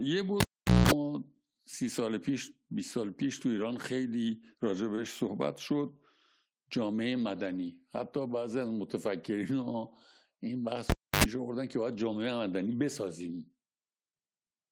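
Cable pulled and plugged in at 0.40 to 0.91 s: a pop, about 460 ms of near silence, roughly 220 ms of 60 Hz mains buzz while only the tip connects, then a second pop as the sound returns. Short concealed packet loss at 4.95 to 4.99 s: about 20 ms of speech never arrived, and the receiver papered over the gap by extending the preceding sound, leaving a brief smear. Cable pulled and plugged in again at 10.90 to 11.24 s: about 290 ms of dropout, with roughly 80 ms of 50 Hz buzz before the closing pop.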